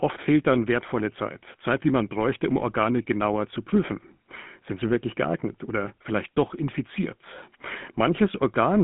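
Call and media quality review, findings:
GSM full-rate codec, throughout. Buzzy, gravelly roughness on speech, plainly audible. Regular-pulse excitation fits the 13 kbps full-rate coder. Spectrogram: hard ceiling near 3.8 kHz, energy confined to roughly 150 Hz–3.5 kHz, coarse harmonic texture.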